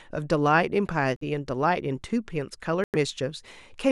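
At 1.16 s the speech drops to silence for about 51 ms, then resumes. At 2.84 s it happens again, for about 99 ms. Each gap sounds like a Bluetooth stall. Radio interference likely delayed packets, and the headphone buffer ran empty until they arrived.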